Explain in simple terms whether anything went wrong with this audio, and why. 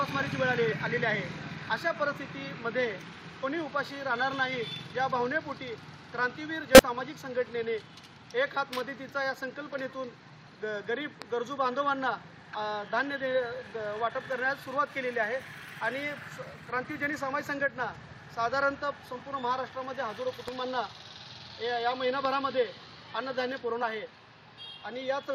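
Yes, two things went wrong. At 0.71, 3.40, 6.75, 12.53 and 23.82 seconds the sound jumps forward. These are compressed frames skipped: small chunks of the stored audio, each a few hundredths to over a tenth of a second, were missing or damaged, so playback leapt past them.

At 11.22, 20.48 and 22.25 seconds there is a single sharp loud pop laid over the sound, which carries on underneath. A pop like this most likely comes from a sudden electrical jolt, such as a plug, switch or static discharge.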